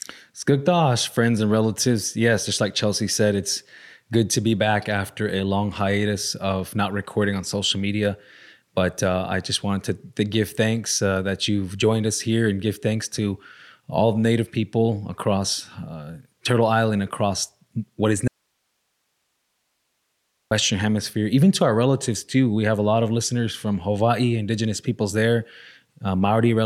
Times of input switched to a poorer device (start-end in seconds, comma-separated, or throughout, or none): none